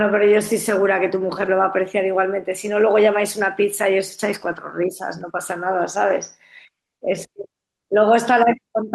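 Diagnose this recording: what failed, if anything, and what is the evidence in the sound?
Lost packet rebuilt from error correction at 1.41–1.47, 4.47–4.57 and 6.09–6.11 s: network loss filled by low-bitrate redundant copies, so the speech turns briefly rougher and noisier without gaps.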